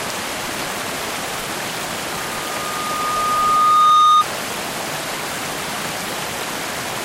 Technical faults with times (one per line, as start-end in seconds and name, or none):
2.10-4.24 loudspeaker feedback squeal